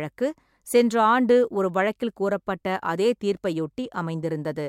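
At 3.37 s there's a repeated buffer: fresh audio didn't reach the output in time, so the device replayed the last chunk it had, twice over, before catching up. Each chunk is only about 1.45 ms, which fits a 64-sample buffer, so you don't hear a stutter. It comes across as a tiny click or a brief buzz in the speech, with the hard joins between copies doing most of the work, and roughly 3 ms of real audio gets skipped.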